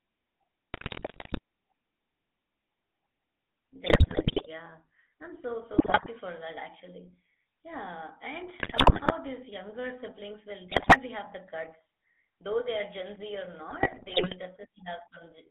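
Throughout, the GSM full-rate codec rebuilds the speech from a vocal-tract model driven by coarse, regularly spaced pulses, consistent with a 13 kbps stream. The line passes only about 250 Hz to 3.5 kHz, leaving a plainly audible buzzy, gravelly roughness.

GSM bit errors corrupt the decoder's filter, pitch and gain values at 0.74 to 1.39 s, 3.86 to 4.47 s (just before "yeah I'm so"), 5.72 to 6.07 s (just before "for that actually"), 8.6 to 9.12 s (just before "these younger siblings will"), 10.7 to 10.99 s and 13.7 to 14.35 s. Each burst distorts the speech into squawks, pops and gargling.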